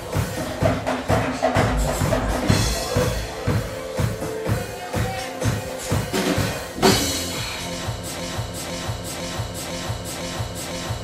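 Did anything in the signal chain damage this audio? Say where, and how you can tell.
Yes. From 8.2 s to the end, a broken-record loop: a 0.5 s fragment repeats exactly, back to back, six times, and the audio meant for that stretch is lost. Identical repeats, rather than a smeared or warbling stall, point to playback or a stream buffer that likely froze and kept resending its last block.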